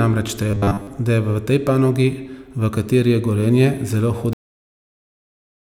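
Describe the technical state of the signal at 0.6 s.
At 0.6 s the speech is in a stretch of robotic sound from repeated short buffers, running from 0.51 to 0.87 s and ending just before "da je". The likely cause is fresh audio arriving too slowly, so the playback side loops the most recent short slice while the real signal is dropped. Most of the span is made of these repeats. The loop imposes a fixed 100 Hz buzz, which fits a slice of about 10 ms, and the speech turns hard and metallic while still loosely tracking its contour.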